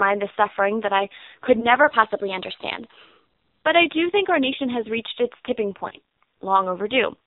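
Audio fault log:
throughout: AMR narrowband mobile codec. Nothing above 4 kHz survives, so the speech sounds boxed-in and telephone-like. The coding is heavy, with a buzzy, synthetic edge on voiced sounds, which fits a low AMR-NB mode around 5.9 kbps. The codec rebuilds the voice from a vocal-tract model and a few pulses instead of coding the waveform, so the damage is a constant robotic texture. It is not a plain low-pass filter, which would dull the sound without the buzz.
1.60–1.66 s and 5.89–5.93 s: lost AMR speech frames, just after "suffering that I could" and just after "has reached its tipping". Each is a brief dip or warble. The gap of about 20 ms fits one lost frame that the decoder concealed by repeating its last pitch and vocal-tract settings at lower gain. These are single-frame events and too short to fade into silence. They are concealed, so they do not sound like the hard click of a dropout.
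1.83–3.65 s: drift correction step, shortly after "suffering that I could". For almost two seconds the speech runs about 6% fast and its pitch rises by a full semitone (100 cents) together, then both snap back at once. This is likely a clock-matching buffer changing the playback rate in a single step. Speed and pitch shift as a locked pair with clean edges, which sets it apart from codec pitch errors or slow wow.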